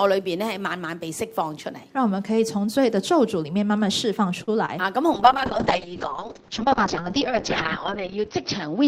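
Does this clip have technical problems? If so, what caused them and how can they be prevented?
Yes. A short stall from a late packet at 4.43 to 4.50 s: the jitter buffer ran dry, so the receiver stretched the last sound for about 42 ms until the packet arrived. Nothing was lost, but the timing slipped. A slightly deeper jitter buffer, or a better network path, would absorb this kind of lateness.

Short concealed packet loss at 4.66 to 4.70 s: about 20 ms never arrived. The decoder extended the preceding sound to cover the gap, leaving a brief smear. Forward error correction or redundant packets would let the receiver rebuild the missing audio instead.

A call bitrate drop from 5.15 s to the end: the bandwidth estimate collapsed, and the encoder fell from 96 to 6 kbps for nearly three seconds. The audio band narrowed from 20 kHz to 6 kHz, so the sound turns rough and muffled. A steadier, less congested connection, or a higher minimum encoder bitrate, would prevent it.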